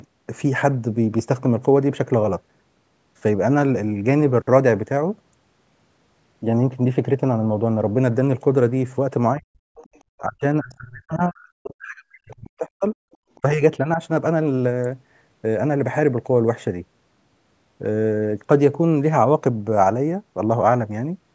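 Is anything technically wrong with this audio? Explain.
Yes. Speech suppressed in double talk appears at 9.37–9.59 s, 10.20–10.44 s, 10.61–12.95 s, 13.42–13.62 s and 13.79–13.99 s. This is likely an echo canceller that, with both sides talking at once, could not tell the talker from the loudspeaker echo and turned everything down. The voice sinks by roughly 40 dB in the deepest dips and drops out for about two seconds in the long stretch. The last two dips are far milder, about 10 dB and 5 dB.

The other side's voice leaking through is heard at 9.75–10.19 s and briefly at 13.12 s and 13.35 s. The far-end voice is likely playing on the talker's loudspeaker and not being fully removed from the microphone. It comes through as a faint second voice, about 25 dB below the speech in the first stretch and only scraps, roughly 35 dB down, in the later two.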